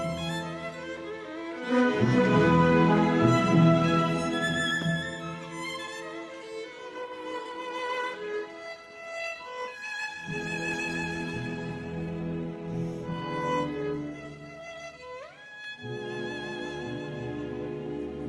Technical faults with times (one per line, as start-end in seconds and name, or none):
6.93-14.93 adaptive stream at a lower bitrate